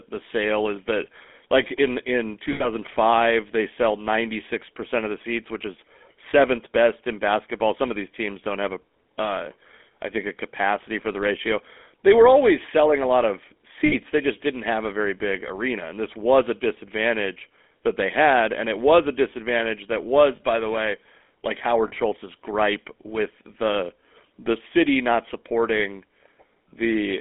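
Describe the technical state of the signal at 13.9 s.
At 13.9 s the speech falls inside a stretch of lost GSM frames, from 13.86 to 13.95 s, just after "selling a lot of". The decoder had nothing valid for that moment, so it reused the last good frame's vocal-tract and pulse settings. The result is a brief rough, metallic ring on the held sound. A silent dropout or a click would not ring like this. The gap fits about three 20 ms frames.

Beneath that, the whole signal carries the GSM full-rate codec. The speech is squeezed into a line band of roughly 250 Hz to 3.5 kHz, and its regularly spaced pulse excitation adds a plainly audible buzzy, gravelly roughness, which points to 13 kbps full-rate coding. A smooth, hiss-free low-pass filter would narrow the band too, but it would not add this grainy buzz.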